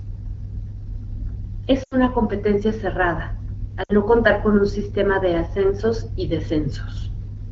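Speech clip over an AMR-WB link at light coding damage, with lost AMR speech frames at 1.83–1.96 s and 3.83–3.93 s. The decoder extends the last pitch and vocal-tract settings at falling gain, so each spot smears and weakens, consistent with roughly 80 ms and 60 ms of concealed frames.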